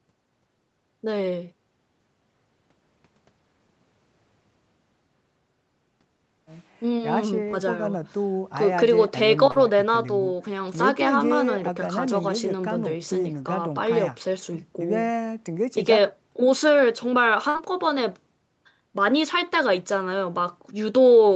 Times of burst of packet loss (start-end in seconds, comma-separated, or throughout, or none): 17.49-17.57